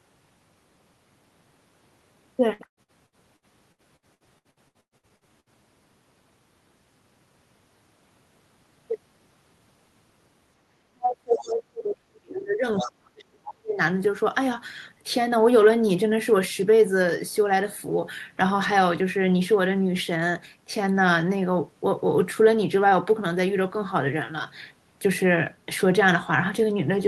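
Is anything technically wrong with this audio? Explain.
Yes, there are three problems, all in the first 14 seconds of the clip.

Repeated packet loss (robotic sound) runs from 2.53 to 5.49 s. It's a rapid string of dropouts, the longest about 118 ms, each patched by stretching the previous bit of sound. About a third of that stretch is filled in this way, so the speech comes out choppy.

Speech suppressed in double talk covers 10.90 to 13.79 s. The talker's level falls away sharply, down by roughly 40 dB at its deepest. The likely cause is an echo canceller that couldn't tell the near talker from loudspeaker echo while both sides were talking, so it pushed everything down.

The other side's voice leaking through shows up twice inside that same stretch. The first scrap runs from 12.75 to 12.91 s at roughly 10 dB below the speech, and a fainter one follows from 13.47 to 13.51 s at roughly 20 dB down. 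Both are fragments of a second voice, likely loudspeaker echo the canceller didn't fully remove.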